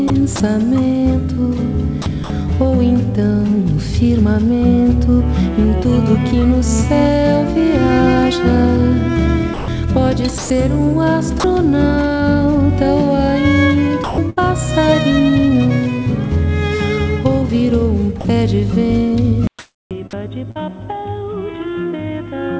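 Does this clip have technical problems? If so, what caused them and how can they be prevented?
Yes. Between 0.08 and 0.40 s, 2.02 and 2.30 s, 9.54 and 10.50 s, and 14.04 and 14.39 s, the sound is chopped by the voice detector. Brief pieces, from 60 to 260 ms, turn to flat synthetic noise. The likely cause is a sender detector toggling on quiet sound. Lowering its threshold or adding hangover time prevents this.

At 11.40 to 11.44 s and 18.21 to 18.25 s, sound is dropped by the voice detector. About 40 ms and then about 30 ms vanish under steady noise. The detector likely judged the quiet sound as background. A more sensitive detector, or disabling discontinuous transmission, prevents it.

From 19.47 s to the end, the input is switched to a poorer device. A 200 ms gap opens, then the sound turns boxy. Nothing remains above 3.8 kHz, and the level drops about 10 dB. This is likely an automatic microphone or headset-profile change. 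Locking the input device prevents it.

From 19.59 to 20.57 s, comfort noise replaces the background. About 365 ms of real ambience becomes a smooth, featureless hiss. This is likely discontinuous transmission during a pause. Turning off discontinuous transmission, or improving the noise model, prevents this.

At 20.51 to 20.57 s, a short concealed packet loss leaves a brief smear. About 40 ms never arrived and roughly 45 ms was filled by extending the previous sound. A larger jitter buffer or forward error correction prevents this.

Elsewhere the call path tops out near 8 kHz, which fits a wideband codec such as G.722.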